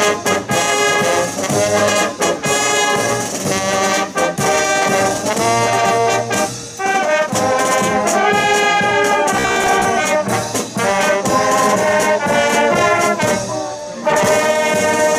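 From 9.37 to 9.88 s the audio takes on a rigid, metallic buzz near 66.7 Hz: robotic sound from repeated short buffers. A 15 ms fragment is likely being looped while fresh audio arrives late, with around two fifths of that stretch made of repeats.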